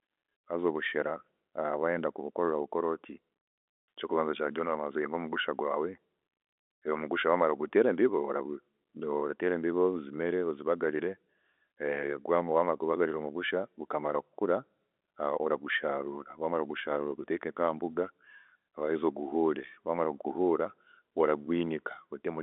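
No technical fault can be heard; the speech carries the narrow band of a G.711 telephone line, roughly 250 Hz to 3.6 kHz, with nothing above about 3.8 kHz.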